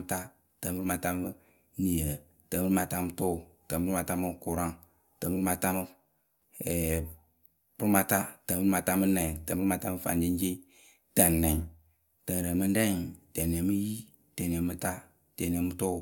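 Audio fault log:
No technical faults can be heard anywhere in this speech recording, and the signal stays continuous and steady in level throughout.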